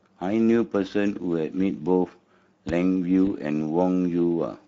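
Speex codec damage runs through the whole speech clip. It is plainly audible. The excitation gets too few bits, so the voice sounds noisy and hoarse. The top band is only a shaped noise fill. The sound points to a Speex setting near 16.8 kbps.

From 2.69 to 2.72 s a loud pop sits on top of the speech, which carries on beneath it. It is a single sharp pop, peaking roughly 10 dB above the signal. A sudden voltage pulse, likely from a switch, plug, static or driver glitch, was added.

From 3.25 to 3.28 s comes VoIP packet loss concealed by the speech codec. The decoder extended its last pitch and filter with falling gain. The speech briefly stretches into a fading sound. It fits one lost 20 ms frame.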